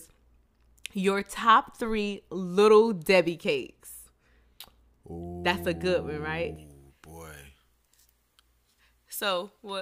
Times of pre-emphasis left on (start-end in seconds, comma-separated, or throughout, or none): 6.56-9.82